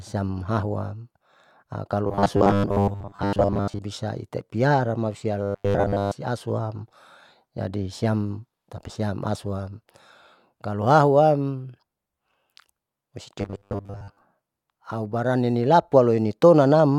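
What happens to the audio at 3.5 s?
Robotic sound from repeated short buffers runs from 2.07 to 3.81 s. Audio likely arrived too seldom, so roughly 10 ms chunks were replayed for most of that stretch, imposing a fixed 100 Hz buzz that turns the speech rigid and metallic.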